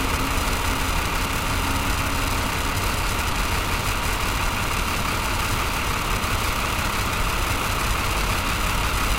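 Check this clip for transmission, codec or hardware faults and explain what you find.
There is one fault: periodic USB or driver dropouts. From 0.40 s to 8.86 s, something blocks the USB bus or audio driver every 0.498 s, and a slice of roughly 2 ms is skipped outright rather than filled. About twenty such gaps fall across that span, evenly spaced. Each skip joins the waveform abruptly, so the sound carries a steady, metronome-like train of ticks, roughly twice a second, heard only where signal is present.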